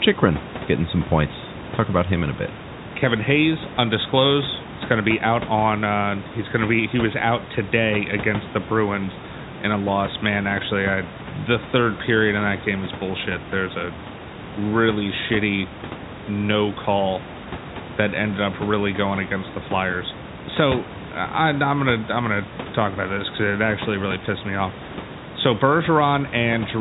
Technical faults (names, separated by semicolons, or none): none